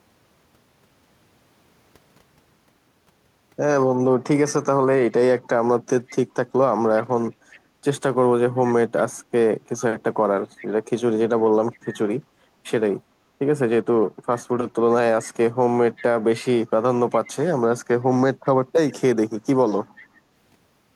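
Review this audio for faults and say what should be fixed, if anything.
A delayed copy of the speech returns about 381 ms after the original in seven places: 4.47–4.52, 6.08–7.59, 8.66–10.67, 11.73–11.79, 15.23–17.3, 18.45–18.93 and 19.99–20.05 s. It sits roughly 20 to 35 dB below the direct speech, briefly in some spots and sustained over longer stretches in others. This is echo leak, likely from a far end on loudspeaker whose echo canceller let part of its microphone pickup pass back. Fix it with a properly converging echo canceller at that end, or with a headset there.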